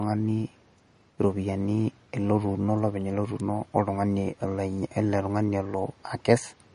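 It's a speech recording with a watery, swirly texture all the way through, plainly audible, with nothing above about 10.6 kHz. That's likely MP3 compression starved of bits, dropping the treble and letting faint detail flicker in and out, which fits a bitrate around 40 kbps. At 3.40 s there's a sharp snap sitting on top of the speech, likely the kind an electrical switching spike makes when a nearby switch or static discharge arcs and gets picked up by the audio line.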